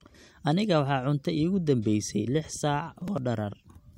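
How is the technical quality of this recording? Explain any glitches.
The recording has one glitch, a processor overload crackle from 2.96 to 3.18 s. The processor missed several buffer deadlines in a row, each around 5 ms, and simply skipped them. The speech tears into a short gritty crackle. Unlike a single dropout, it is a cluster of tiny hard-edged gaps that stops once the load eases.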